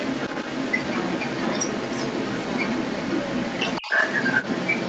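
From 0.0 to 4.9 s, other side's voice leaking through, likely from incomplete echo cancellation: a second voice, roughly 10 dB above the talker, shows as overlapping harmonic stripes on a spectrogram.

From 3.81 to 3.93 s, speech suppressed in double talk: the talker's level drops by roughly 20 dB. This is likely the canceller turning both voices down, and it shows as a brief notch in the waveform envelope.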